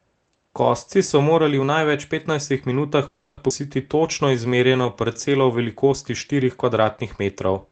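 At 3.07 s the speech stops moving forward. The last sound carries on as a fading buzz-like continuation until 3.40 s, and then the speech resumes exactly where it left off, with nothing lost. This is a call audio freeze. The likely cause is that packets were held up in transit and the jitter buffer ran dry, so the receiver spent about 300 ms filling the gap by extending the final sound. That wait adds the same 300 ms of delay to everything that follows.

Shortly afterwards, between 3.49 and 3.53 s, the speech jumps abruptly forward. Roughly a fifth of a second of material is gone, and the two sides are stitched together with only a tiny bridge of about 10 ms. This skip ahead happened because audio was discarded while later packets were already queued. It claws back some of the delay built up during the freeze.

From 3.97 to 5.60 s the speech drags. It plays at about 90% speed with unchanged pitch, and sounds are stretched out. 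This is a jitter buffer slow-down. To build up a reserve, the buffer repeated single pitch periods and slivers of pauses over and over, adding 164 ms in total. Throughout the clip, the call codec's narrowed high end can be heard, consistent with an 8 kHz bandwidth limit.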